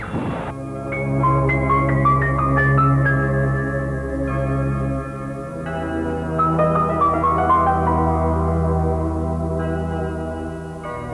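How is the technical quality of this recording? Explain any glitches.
No technical faults are audible.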